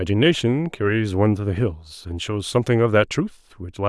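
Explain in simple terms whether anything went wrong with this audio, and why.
Nothing went wrong here.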